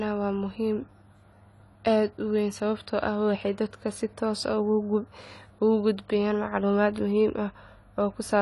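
From start to finish the speech sounds dull and smeared. Nothing is heard above 11.5 kHz, and sibilants and sustained vowels carry a fizzy, warbling texture. The likely cause is AAC compression at a low bitrate, which fits AAC-LC at around 32 kbps. With so few bits, the encoder lowers its cut-off and coarsely quantises each frame's frequency lines. This leaves gaps in the spectrum that come across as this plainly audible codec damage.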